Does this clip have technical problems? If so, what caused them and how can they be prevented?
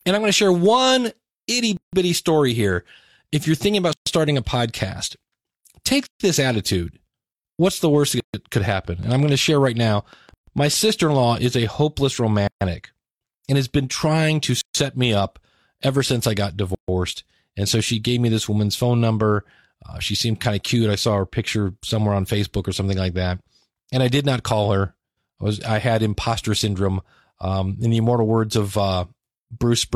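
Yes. Gaps at a join of encoded pieces fall at 1.77, 3.93, 6.07, 8.20, 10.34, 12.47, 14.61 and 16.75 s. The first, between "to share one itty" and "story here", lasts 159 ms. The rest last 136 ms, including the ones before "this attitude" and after "the worst". The gaps recur every 2 s because separately encoded chunks kept their encoder start delay and final-frame padding, leaving short silences with softened edges before the speech resumes. To prevent this, encode the audio as one continuous stream, or trim each chunk's encoder delay and padding before joining them.

A train of clicks runs from 8.72 to 11.20 s. It is about fifteen evenly spaced pops at 6.4 per second, peaking near the level of the speech and audible over it. The likely cause is electrical interference from nearby equipment or a faulty connection or power supply injecting repeated pulses. To prevent this, move cables away from nearby equipment and check the connections and power supply.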